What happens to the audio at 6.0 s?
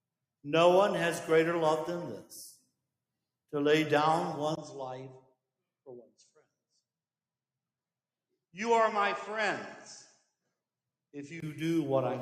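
Between 5.86 and 6.17 s the sound dips sharply, sinking by up to about 20 dB for around 150 ms in total. This is sound cut by the noise suppressor: it mistook this stretch for noise and turned it down more than everything around it.

The moment also sits inside a longer dull, narrowed stretch from 4.55 to 11.42 s, with a level drop of about 5 dB, a faint new noise floor, and a 20 ms gap at the start. The input was likely switched to a poorer device.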